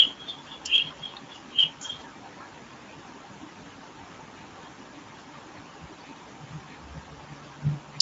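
Throughout, the speech carries Speex codec damage: starved CELP excitation leaves it hoarse and noisy, fitting roughly 16.8 kbps, and a spectrogram shows nothing above 7.8 kHz.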